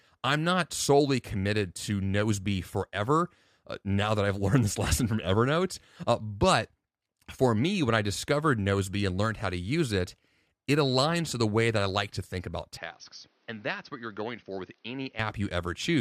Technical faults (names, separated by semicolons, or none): input switched to a poorer device